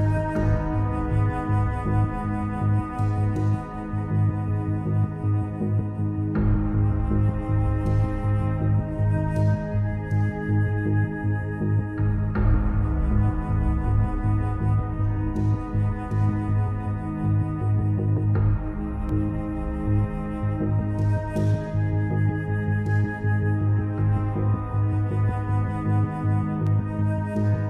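A tick or dip at 19.09 s and another at 26.67 s are each a block of digital silence: the signal drops straight to silence and returns with no fade. The first gap lasts about 1.45 ms, which fits a 64-sample block, and the second about 0.73 ms, which fits 32 samples. This most often happens when an output buffer is not filled in time. Both holes are too short to hear as gaps, so each one is heard as a tick or dip rather than as silence.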